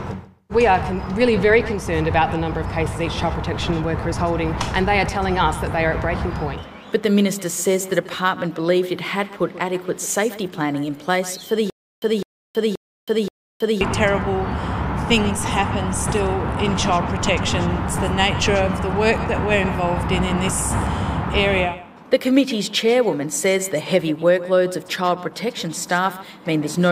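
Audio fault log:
11.7–13.81 s stutter with silent gaps: the same 206 ms burst returns four times, every 527 ms, with 322 ms of dead silence between. That is likely a stalled stream replaying its last fragment. The repetition sets it apart from a simple dropout.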